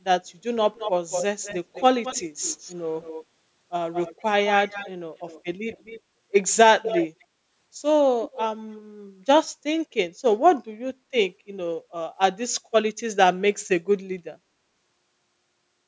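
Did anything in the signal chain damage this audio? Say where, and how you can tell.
Yes. The damage sits in the call processing stage and takes the form of echo leak. A delayed copy of the speech trails the direct sound at 0.74 to 3.25 s, 3.93 to 6.0 s, 6.83 to 7.25 s and 8.24 to 8.82 s. The lag is 216 ms in the first two stretches and 255 ms in the last two. The copy stays quieter than the speech and is strongest near 7 s. The likely cause is a loudspeaker on the other end whose echo canceller let some of its own playback back into the microphone.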